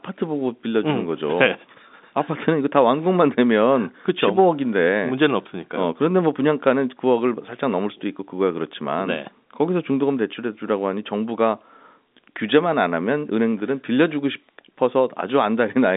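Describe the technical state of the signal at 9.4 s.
Nothing is wrong at 9.4 s: the speech there is intact, carried on a G.711 telephone line band from about 200 Hz to 3.7 kHz with nothing above 4 kHz.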